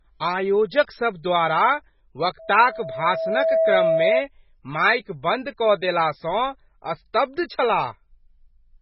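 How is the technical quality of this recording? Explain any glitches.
The recording has heavy codec damage throughout and one feedback squeal partway through.

MP3 compression, throughout: the sound is watery and swirly, with nothing above 5.5 kHz, which fits a very low bitrate around 16 kbps. The likely cause is an MP3 encoder starved of bits. It zeroes weaker frequency lines, which then flicker on and off between frames, and it removes the top of the spectrum entirely. Sibilants turn metallic and attacks smear.

Loudspeaker feedback squeal, 2.39 to 4.23 s, ending just before "माइक बन्द कऽ देला": a single 651 Hz tone swells up over about a second and sits roughly 5 dB above the speech. The microphone was picking up the loudspeaker it fed, and at that frequency the loop gain exceeded one, so the tone kept feeding itself.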